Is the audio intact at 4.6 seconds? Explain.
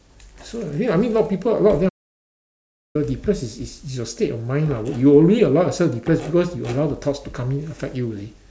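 Yes, at 4.6 seconds the audio is intact, with no dropout, click, distortion or other fault at that moment.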